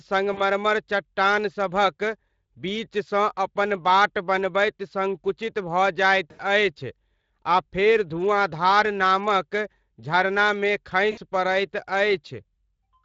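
Speech, coded throughout with the Speex codec at about 20.6 kbps, which sounds plainly grainy and hoarse. VoIP packet loss concealed by the speech codec hits at 0.33, 6.31 and 11.11 s, stretching the last sound into a fading tone or coloured noise for 40, 80 and 60 ms.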